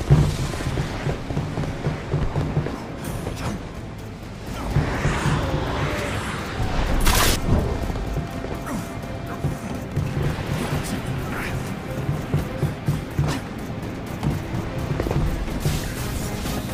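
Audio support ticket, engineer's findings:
Nothing stood out on listening; no symptoms found to attribute to any component.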